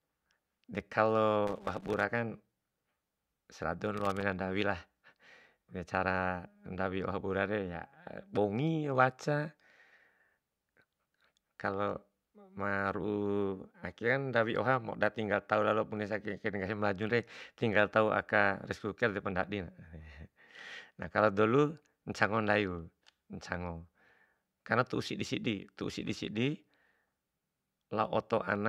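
Loose connector crackle appears from 1.47 to 2.03 s and again from 3.97 to 4.22 s: an intermittent contact chops the speech signal, producing irregular scratchy bursts.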